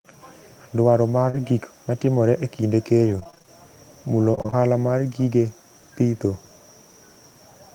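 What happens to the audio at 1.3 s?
At 1.29 to 1.35 s there is a short concealed packet loss. About 40 ms of the speech never arrived in time. The receiver filled the gap by extending the preceding sound, then blended back. It comes across as a brief smear or wobble.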